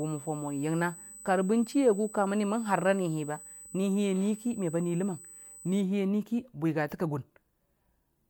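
From the start to 5.81 s there's USB whine, a steady fixed-pitch tone at 8 kHz sitting roughly 20 dB below the speech. That's the bus's 125-microsecond microframe current bleeding into power or ground. It stops just before "a nui ki bwigate".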